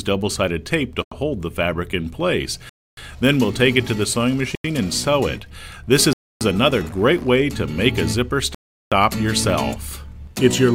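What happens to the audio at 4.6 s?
At 4.55 s the sound drops into a block of digital silence lasting about 93 ms, until 4.64 s. The sound cuts out and returns with no fade, leaving a short, dead hole. The length fits one 4096-sample buffer at 44.1 kHz that wasn't filled in time. The silence and hard edges set it apart from a faded dropout or a concealed packet loss.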